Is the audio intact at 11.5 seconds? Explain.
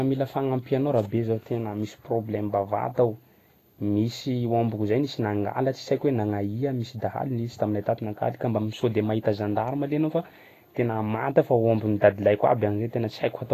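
No. At 11.5 s, as throughout the speech, the treble is grainy and hissy, consonant attacks are smeared, and nothing remains above 14.2 kHz. This is likely Vorbis compression at a low bitrate of around 30 kbps, where the coarsely quantised high-frequency residue turns fine detail into noise.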